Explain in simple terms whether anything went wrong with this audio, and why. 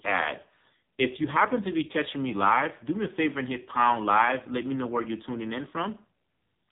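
Yes. The speech went through an AMR narrowband mobile codec, the old phone-call compressor, for the whole clip. Nothing above 3.8 kHz survives, and heavy squeezing leaves it buzzy and synthetic.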